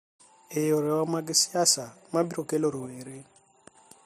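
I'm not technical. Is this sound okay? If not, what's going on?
No. At 2.86 seconds the recording's digital volume setting was likely switched down in one instant instead of being eased down gradually. That causes a sudden gain jump: the speech and the background noise behind it drop to a quieter level together, with no fade between them. The volume stays at that lower level until 3.75 seconds, when it jumps straight back up to where it started.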